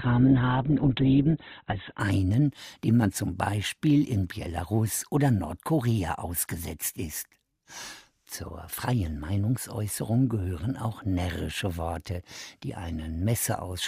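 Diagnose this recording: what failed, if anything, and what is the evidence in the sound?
For the first 2.0 s the speech sounds dull and muffled, with no content above about 4.2 kHz and heavier codec smearing, then at 2.0 s it abruptly turns full and clear without any gap. This is an adaptive stream starting at a low bitrate, a codec and network-stage effect: the player began on a cheap rendition, consistent with Opus near 12 kbit/s, until it had measured the connection, then switched to a richer one fitting roughly 64 kbit/s.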